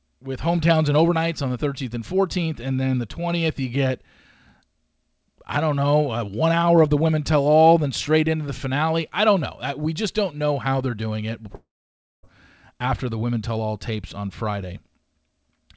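Hard clipping at 6.76 to 6.81 s, between "don't know uh one" and "of the women tell": the speech peak briefly exceeded what a stage could pass, by about 1 dB, so its tops were cut flat. The small overload adds high harmonics heard as a short crackle.

A long network dropout from 11.55 to 12.25 s, just before "after the women tell", likely caused by audio packets failing to arrive for about 0.68 s. The receiver stretches the last sound into a fading buzz, then about 0.57 s of silence follows before speech resumes with that stretch missing. Throughout, nothing above 8 kHz is present, which fits a G.722 call codec at 64 kbps.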